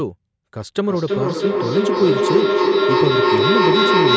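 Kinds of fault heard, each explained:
Feedback howl: from 0.78 s a tone near 400 Hz swells, with repeats roughly every third of a second, and peaks about 5 dB above the speech. Two devices in one room share the call; each microphone-to-loudspeaker trip adds gain, so repeats grow rather than fade.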